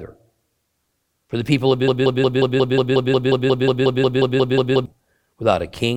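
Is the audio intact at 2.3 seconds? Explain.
No. At 2.3 seconds a broken-record loop is under way, running from 1.88 to 4.86 s just after "the people of". A 180 ms fragment repeats 17 times back to back, likely from a stalled player or stream resending its last buffer, so the intended speech is lost. On a spectrogram or waveform it appears as identical blocks tiling every 0.18 s.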